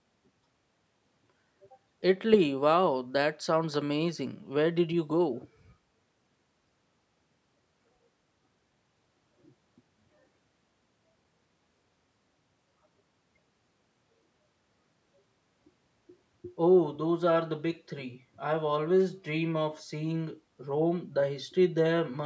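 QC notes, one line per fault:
No faults heard; call microphone processing sounds normal.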